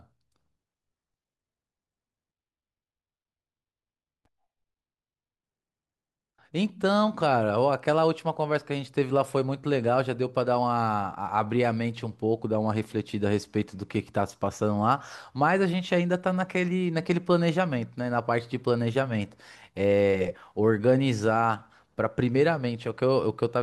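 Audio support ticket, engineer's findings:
Speech, 2.32–5.43 s: dull, robotic, buzzing near 188 Hz, no clear octave drop. Interleaved audio read as planar. Each 5.33 ms block is split in halves, not alternating samples. The half-speed halves repeat per block, which fits a 256-sample buffer. Suspect the channel-layout handling in the decode or mix stage.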